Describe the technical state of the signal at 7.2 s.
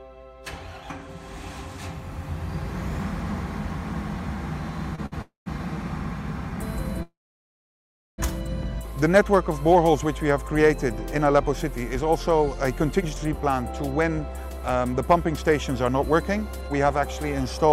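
At 7.2 s the signal sits inside a call audio freeze running from 7.03 to 8.20 s, likely from packets stalling so the jitter buffer emptied. A brief fading buzz gives way to about 1.06 s of silence, then the sound resumes intact, 1.15 s late. The spectrogram shows a short smeared tail, then an empty band; the waveform goes flat.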